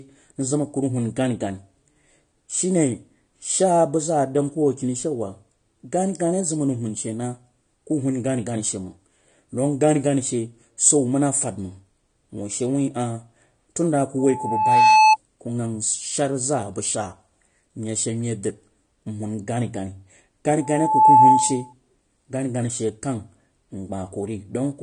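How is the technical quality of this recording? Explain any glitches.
The recording has two technical problems: codec damage throughout and two bursts of feedback.

Throughout, the speech is dull and smeared, with nothing above 9.7 kHz and a warbling, fizzy texture on sibilants. It is likely AAC compression at a low bitrate, around 32 kbps. Unlike a simple low-pass filter, it also smears and warbles.

From 14.19 to 15.17 s and from 20.61 to 21.73 s there is a loudspeaker feedback squeal. The microphone re-amplifies its own loudspeaker at 869 Hz. A steady tone swells over under a second to about 10 dB above the speech. That growth sets it apart from a fixed hum or test tone.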